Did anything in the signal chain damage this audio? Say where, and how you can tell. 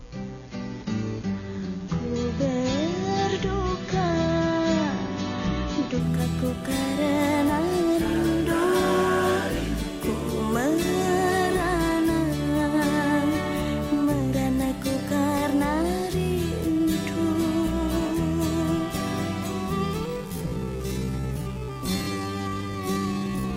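Yes. At the network and codec stage, an adaptive stream starting at a low bitrate: the spectrogram is empty above 6.9 kHz until 6.0 s, then treble appears abruptly, with no gap.

A time-stretched section runs from 20.04 s to the end at half speed with unchanged pitch, so it drags. The waveform shows repeated onsets, likely from stretching software.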